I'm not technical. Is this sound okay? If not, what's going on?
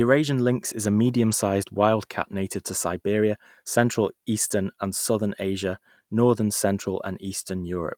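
No. There are two lost packets rebuilt from error correction, at 1.31 to 1.33 s (between "lynx is a" and "wild cat native to") and at 4.47 to 4.49 s. Each time, 20 ms of sound went missing, and a rough backup copy filled the gap, so you hear a brief grainy patch rather than silence.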